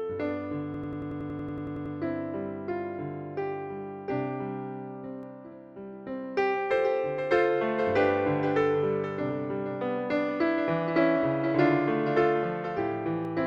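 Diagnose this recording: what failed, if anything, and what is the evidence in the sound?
System hang loop, 0.74 to 1.95 s, at the driver or buffer stage: one 92.88 ms slice repeats 13 times at 10.8 Hz, a machine-gun stutter. The length fits a 4096-sample ring buffer the hardware kept replaying while the driver froze; essentially no audio appears lost.

Doubled audio track, 5.23 to 13.25 s: a full-band copy trails the original by about half a second, about 10 dB quieter, with no decay or room colour, starting and stopping abruptly. Likely a second, slower capture path mixed into the recording.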